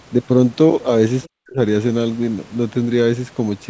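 From 1.23 to 1.28 s, the other side's voice is leaking through, likely because the echo canceller failed to fully remove the far end's loudspeaker sound from the microphone signal. The result is a brief, faint scrap of a second voice, around 30 dB below the main speech. It lasts only about 50 ms, so it registers as a blip under the talker rather than as words from the other side.

Overlapping the end of that, from 1.27 to 1.61 s, the speech is suppressed in double talk. The likely cause is that the echo canceller heard both sides at once, could not separate the talker from the echo, and turned the whole signal down. The talker's voice sinks sharply, by around 40 dB at its lowest, over roughly a third of a second before recovering to its normal level.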